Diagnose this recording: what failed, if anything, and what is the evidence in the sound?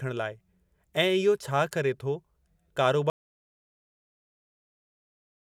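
The input feed was likely lost partway through, through a dropped device, broken link or accidental mute, while the recorder kept writing silence. The speech cuts off abruptly at 3.1 s, and this audio dropout to silence is total, with no room tone, running to the end.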